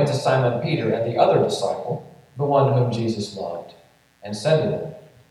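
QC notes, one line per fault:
Throughout: mains buzz, a steady raspy 60 Hz hum rich in harmonics into the kilohertz range, roughly 40 dB below the signal, from switching spikes.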